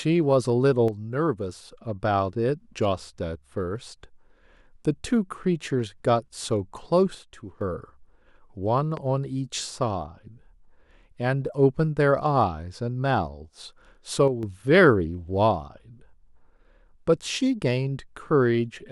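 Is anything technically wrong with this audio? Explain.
Yes. At 0.88 to 1.72 s, 7.15 to 7.61 s and 14.28 to 14.43 s the speech abruptly drops by about 6 dB, then returns just as suddenly. This sounds like one channel dropping out: losing one stereo channel before the mono sum likely halves the shared signal.

Between 8.97 and 9.00 s a single sharp loud pop sits on top of the speech, peaking a few dB above it while the speech carries on underneath. A brief voltage step from a plug, switch, static or driver glitch is the likely cause.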